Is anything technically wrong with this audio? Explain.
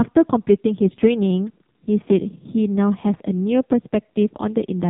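Yes. Throughout the speech, the AMR narrowband mobile codec has heavily degraded the sound. It resamples to 8 kHz, so everything above 4 kHz is removed, and the voice is rebuilt from a vocal-tract model excited by a few pulses per 5 ms subframe. The heavy buzzy, synthetic quality points to a low mode near 5.9 kbps. On a spectrogram there is a hard, flat ceiling at 4 kHz with empty space above it.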